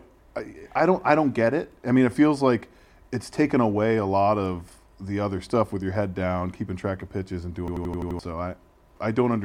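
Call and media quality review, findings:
System hang loop, 7.68–8.19 s, after "track of pitches and": driver stall, ring buffer (fits 4096 samples) replays one 85 ms chunk six times. 11.7 Hz stutter.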